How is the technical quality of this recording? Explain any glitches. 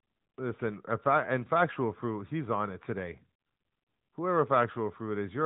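The quality is limited by a mobile codec throughout. Throughout, the AMR narrowband mobile codec is clearly audible. Nothing passes above 3.8 kHz, and the speech sounds buzzy and synthetic. Its moderate coarseness fits a mid-rate mode near 10 kbps.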